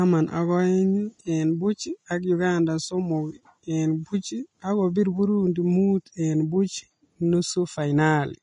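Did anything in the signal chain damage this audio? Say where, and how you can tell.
Yes: Vorbis compression throughout, likely at the codec stage. Nothing survives above 10.6 kHz, and the speech sounds hissy and grainy, which fits a bitrate around 30 kbps.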